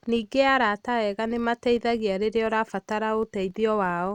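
Filter restarted on every block, throughout the speech: the filter drops its memory at each block boundary and restarts from silence, so every block opens with a small transient. The result is a buzz at about 43.1 Hz, which fits a 1024-sample block, rising and falling with the speech level.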